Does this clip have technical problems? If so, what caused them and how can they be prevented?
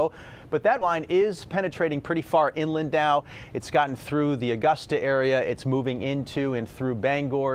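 Yes. Skip ahead at 0.81 to 0.83 s: roughly 0.7 s of sound is dropped and playback jumps straight to later audio with no gap filled. A larger jitter buffer that discards less audio on overflow prevents this.

Jitter buffer speed-up from 0.99 to 3.19 s: after audio piled up, the receiver trimmed short pitch-period pieces, about a fifth of a second in total, so the sound runs at 111% speed and seems hurried at unchanged pitch. Steadier network delivery and gentler buffer-shrinking prevent this.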